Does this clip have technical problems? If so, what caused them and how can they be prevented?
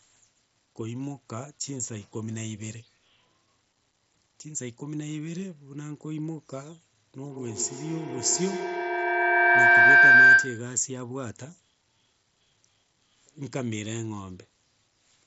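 Yes. A feedback howl runs from 7.25 to 10.81 s. Two devices in one room form a loop that gains level each trip. The repeats grow, narrow to about 1.5 kHz, pulse roughly every tenth of a second, and peak about 16 dB above speech. To prevent it, keep only one device's microphone and loudspeaker active in a shared room.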